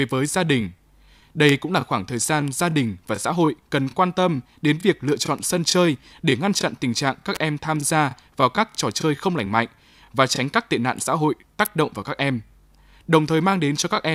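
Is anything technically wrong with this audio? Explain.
Yes, there are three electrical switching spikes: at 1.49 s just before "cũng là khoảng thời", at 7.35 s after "chặn tình trạng các", and at 11.65 s after "tệ nạn xã hội". Each is a sharp snap peaking near full scale, then about -5 and -10 dBFS. The likely cause is nearby switch or motor arcing coupling into the line. The speech carries on uninterrupted underneath, which sets them apart from dropouts or edit clicks.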